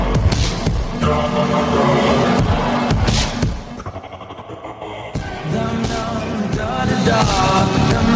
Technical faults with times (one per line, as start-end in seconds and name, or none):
0.00-8.15 gain pumping